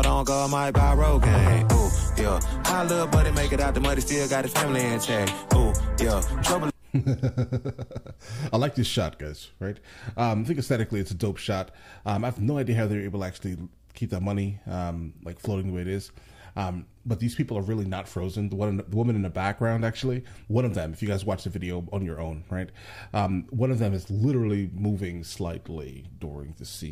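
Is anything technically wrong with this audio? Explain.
No, nothing technically wrong can be heard in this audio. The recording holds together throughout without any audible dropouts, distortion or interruptions.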